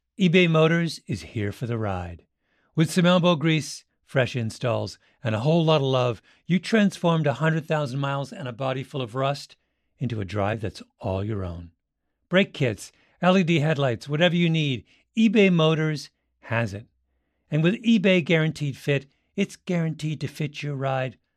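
No technical faults are audible.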